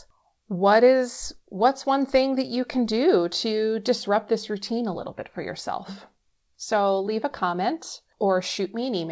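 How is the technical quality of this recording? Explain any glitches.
No glitches can be heard anywhere in the recording. The sound has passed through a call path whose coding stops everything above 8 kHz, which fits a wideband codec such as G.722 at 64 kbps.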